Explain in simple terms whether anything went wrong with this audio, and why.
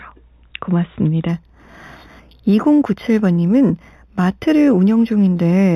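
Imaging from linear upsampling is heard from 1.29 s to the end. The sound was stored at 8 kHz and then raised to 48 kHz by drawing straight lines between the original samples. That crude method dulls the top of the speech and leaves a faint mirror copy of it between 4 and 8 kHz. You hear that copy as a light metallic shimmer, clearest on hissy sounds like s and sh.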